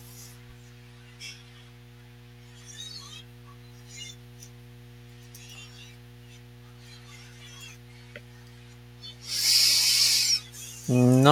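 It's a speech recording with mains hum running the whole way through: a steady 60 Hz drone, sitting roughly 25 dB under the speech. That points to a ground loop or nearby transformer leaking power-line current into the signal path.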